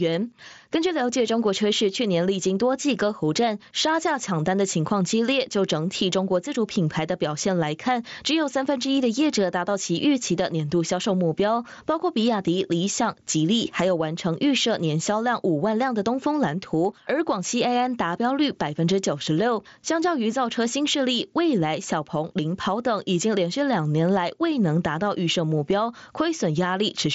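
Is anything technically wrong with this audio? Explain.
Yes. Throughout the speech there is gain pumping. The gain ducks by around 10 dB under each loud syllable, likely because the input gain is set far too high and a fast limiter keeps clamping it. On a waveform the peaks look flattened to one level and the noise floor rises between phrases. A spectrogram shows that background band brightening in the gaps, within the Bluetooth headset audio, which has nothing above 7.7 kHz.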